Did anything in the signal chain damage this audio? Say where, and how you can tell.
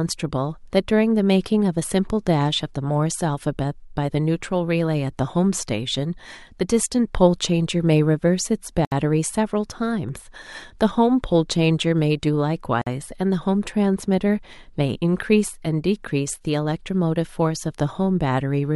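Yes: the speech drops into silence at 8.85 s (68 ms) and 12.82 s (50 ms). These are gaps at joins of encoded pieces, caused by untrimmed encoder delay and padding.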